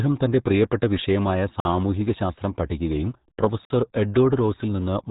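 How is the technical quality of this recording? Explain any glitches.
The technical quality is poor: the speech is heavily codec-damaged throughout and is twice broken by brief silences.

RealAudio 14.4 codec, whole clip: this 8 kbit/s dial-up speech coder keeps only a crude model of the voice and passes nothing above 3.8 kHz, so the speech sounds muffled and gargly. Unlike a clean telephone band-limit, the remaining band itself warbles and smears.

Gap between chunks, at 1.60–1.65 s and 3.65–3.70 s: the audio arrives in 2-second chunks with 50 ms of silence inserted at each join. The first falls after "തന്റെ പ്രിയപ്പെട്ട വിഷയമായ" and before "സാമൂഹികശാസ്ത്രം പഠിക്കുകയും", and the second after "പ്രിയപ്പെട്ട വിഷയമായ സാമൂഹികശാസ്ത്രം പഠിക്കുകയും". These are hard-edged holes at a regular spacing. Unlike a dropout, no speech is lost: it resumes exactly where it paused.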